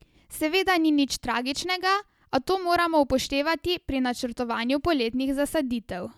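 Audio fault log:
No faults turn up anywhere in the speech clip. Nothing in the audio calls for an entry in this log.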